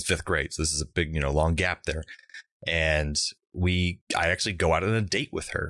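No technical faults are audible anywhere in the recording.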